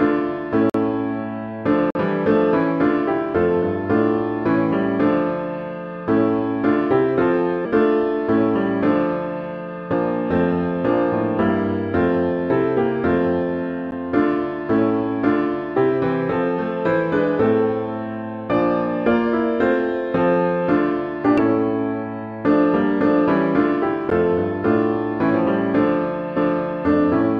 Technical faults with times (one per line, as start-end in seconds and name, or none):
0.70-0.74 block of digital silence
1.90-1.95 block of digital silence
7.64 damaged data in a compressed stream
9.92 damaged data in a compressed stream
13.91 block of digital silence
15.76 damaged data in a compressed stream
21.38 damaged data in a compressed stream
24.10 block of digital silence
26.36 damaged data in a compressed stream